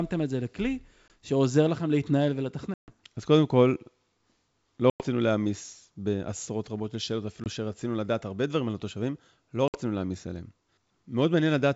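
Packet loss on the ADPCM call cuts hard-edged silent gaps at 1.08 s (20 ms), 2.74 s (140 ms), 4.90 s (100 ms), 7.44 s (20 ms) and 9.68 s (60 ms). Each time, the decoder's predictor and step size drift from the sender's, so the speech resumes distorted until they resynchronise.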